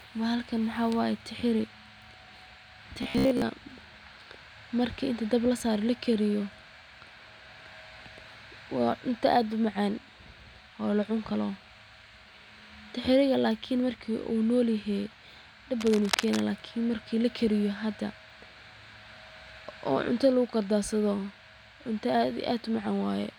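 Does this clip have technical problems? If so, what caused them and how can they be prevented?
Yes. From 3.03 to 3.42 s the speech turns into robotic sound from repeated short buffers, a rigid metallic buzz at 66.7 Hz. That likely comes from audio arriving late and a roughly 15 ms block being looped in place of most of the real signal. Larger buffers or a less loaded processing path would prevent it.

From 15.79 to 16.40 s there is cable scratch noise, dense irregular crackle nearly as loud as the speech. It is likely a worn cable or connector whose contact shifted when moved. Replacing or securing the cable and connectors would prevent it.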